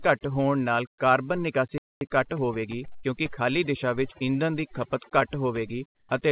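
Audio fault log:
Throughout: overdone noise removal. The background sinks to near silence, broken by brief twinkling specks. The suppressor pulls individual frequency bands down or out whenever they sit close to its noise estimate, taking the quieter parts of the speech with them. On a spectrogram this shows as a patchy, moth-eaten texture, with isolated bright dots in the gaps and everything cut off above 4 kHz by the narrowband call codec.
1.78–2.01 s: playback stall. The speech stops mid-flow for about 230 ms of dead silence, then carries on. The likely cause is the player running out of buffered data, or its thread being blocked, so nothing reached the output until it recovered. On the waveform this is a flat line with no decay, cutting off abruptly and restarting just as abruptly. On a spectrogram it is a fully blank vertical band.
2.01–4.32 s: time-compressed catch-up. Straight after the stall the speech runs about 1.1 times faster than normal but keeps its pitch. 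To work off the backlog, the player cuts out small pieces and cross-fades across the joins. The waveform looks slightly crowded, with syllables packed closer together. On a spectrogram, harmonics stay level but show small periodic seams where pieces were removed.
2.96–3.05 s: burst of packet loss. For about 70 ms the last sound is held and fades, giving a buzzy or hissy smear. The speech then resumes about 80 ms further on, and the stretch in between is lost. The receiver concealed the gap by extending and attenuating what it last had. On a spectrogram the harmonics freeze into flat, dimming lines and then jump. On the waveform a repeating, shrinking cycle appears, followed by a discontinuity.
5.95–6.09 s: sound dropped by the voice detector. For about 140 ms the speech gives way to smooth, steady low-level noise, and about 70 ms of speech disappears before it returns. The sender's voice activity detector likely classed a quiet passage as background and stopped sending, so the receiver substituted comfort noise. 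The spectrogram shows a uniform, featureless noise patch in place of harmonic structure. On the waveform the envelope flattens to a constant low level.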